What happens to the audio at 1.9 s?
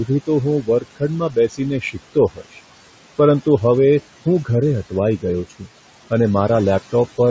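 Parts of the speech between 1.81 and 2.59 s sound swallowed, faint or suddenly dipped, about a third of a second in all, sinking by up to about 18 dB. This is speech cut by the noise suppressor: it mistook those quieter speech sounds for steady background noise and lowered them along with the noise.

Around that moment the leftover background also sinks between words and rises under them. These are noise suppressor artifacts from the suppressor pulling detected noise down by about 17 dB, frame by frame, in separate frequency bands.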